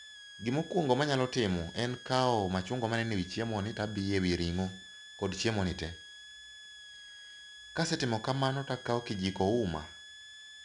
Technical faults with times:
0.00-10.64 switching supply whistle
0.00-10.64 4-bit ADPCM compression

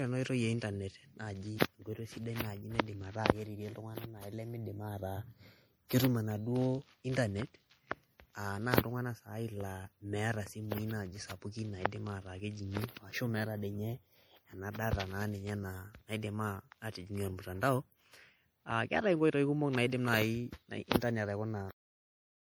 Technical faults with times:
0.00-22.55 generation loss

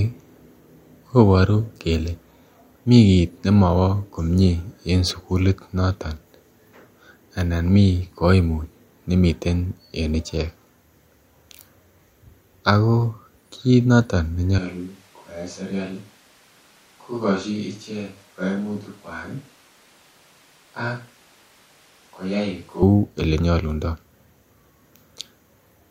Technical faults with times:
14.59-22.82 switch to a distant microphone

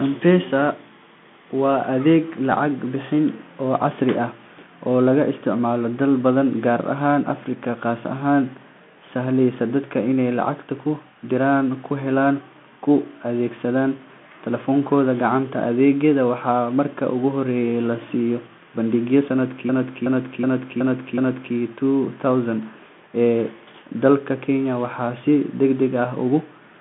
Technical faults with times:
0.00-26.80 Bluetooth CVSD headset codec
19.69-21.55 system hang loop

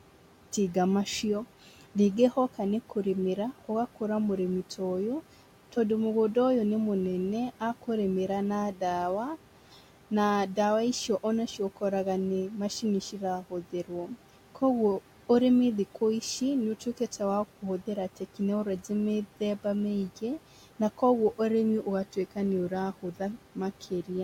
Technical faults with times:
0.00-24.23 noise suppressor artifacts
13.41-13.91 speech cut by the noise suppressor
23.81-24.10 speech cut by the noise suppressor

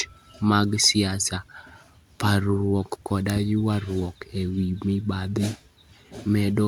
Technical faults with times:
none

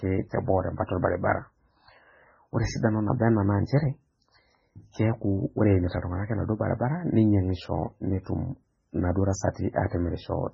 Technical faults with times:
0.00-10.53 MP3 compression

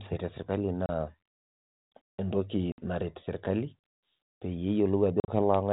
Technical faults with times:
0.86-0.89 packet loss on an ADPCM call
2.72-2.84 packet loss on an ADPCM call
5.20-5.30 packet loss on an ADPCM call

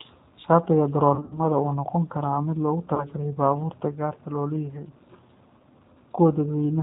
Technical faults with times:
0.00-6.82 G.729 codec
1.15-1.41 VoIP packet loss concealed by the speech codec
2.95-3.06 VoIP packet loss concealed by the speech codec

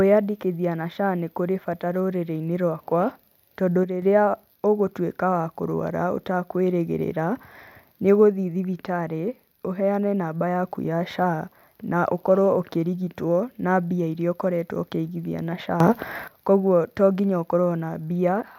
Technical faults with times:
3.83-4.02 sudden gain jump
15.80-16.28 sudden gain jump

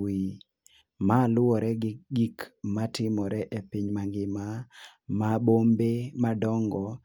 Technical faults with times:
none

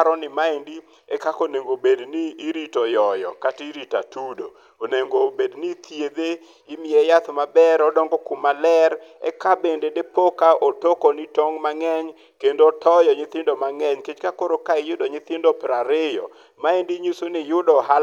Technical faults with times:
none

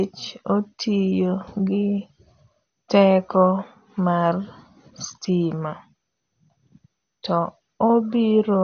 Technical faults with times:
0.00-8.64 MP2 compression

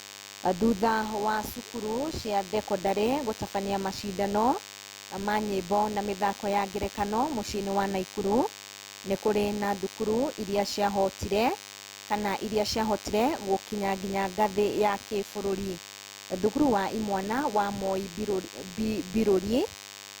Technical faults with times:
0.00-20.20 DECT cordless phone buzz

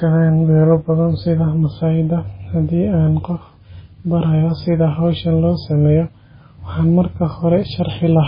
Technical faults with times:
0.00-8.28 MP3 compression

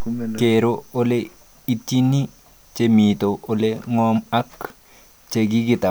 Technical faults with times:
none

